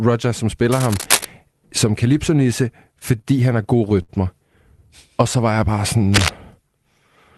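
Cable scratch noise runs from 0.70 to 1.25 s and again from 6.12 to 6.31 s, just after "så var jeg bare". It sounds like dense, ragged rustling roughly as loud as the speech. The likely cause is a worn connector or cable being moved, making its contact resistance flicker.

Repeated stalls (stutter) run from 2.99 to 4.10 s. Packets arrived late again and again, and the jitter buffer ran dry nine times. Each time the last sound was stretched to bridge the wait, with the longest gap 61 ms and about 150 ms filled in total. Nothing is lost, but the speech drags and stumbles.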